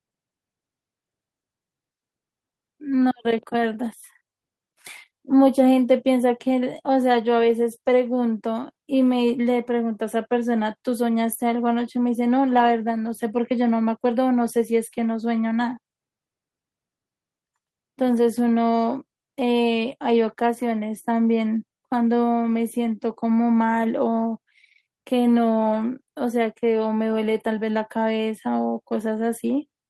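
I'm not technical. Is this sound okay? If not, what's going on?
Yes, nothing wrong turns up anywhere in this speech recording.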